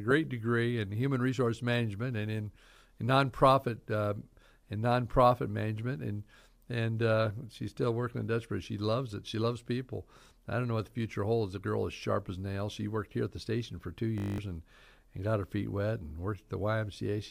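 At 14.18 s, after "the station for two", the system hangs while the sound hardware keeps replaying one 20 ms stretch of its ring buffer, a system hang loop. Ten exact repeats make a steady 50 Hz buzz until 14.38 s, replacing roughly a fifth of a second before "and and got her".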